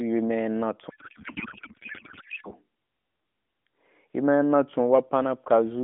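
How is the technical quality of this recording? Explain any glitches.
The recording has one clear glitch, heard over a narrowband mobile line limited to roughly 200 Hz to 3.6 kHz with light AMR narrowband codec coloration, which fits the 12.2 kbps mode.

From 0.90 to 2.51 s, a codec payload misread replaces the speech with garbled warbling noise. The decoder misplaced the frame fields, which fits octet-aligned AMR being read as bandwidth-efficient.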